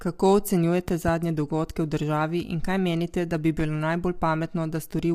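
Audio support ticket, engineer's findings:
Low-delay AAC compression, whole clip: speech rough and grainy throughout, with noise filling the gaps between pitch harmonics and a thin, synthetic-sounding top band. Likely cause is a low-delay AAC-ELD encoder at low bitrate; the damage level fits around 32 kbps. Its short frames resolve the harmonic structure of the voice poorly and spend bits inefficiently, so at this rate the encoder smears noise between harmonics and approximates the upper band.

Loud pop, 0.88–1.11 s: two sharp pops in quick succession, well above the speech (around 10 dB), which continues underneath. Single loud pop at 3.60–3.62 s, similar level. Likely cause is an electrical transient (static discharge, connector, switch or driver glitch) adding a voltage step or pulse to the signal, shaped by downstream circuitry into an audible pop.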